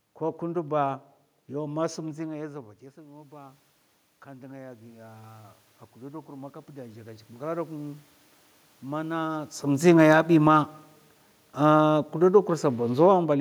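From 4.23 s to 8.06 s the voice and the room noise swell together, by about 9 dB over nearly four seconds. This is automatic gain rising: the input dropped about 17 dB, so the gain control slowly turned up, lifting background and speech alike.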